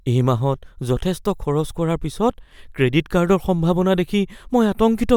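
Speech recording, no audible technical faults.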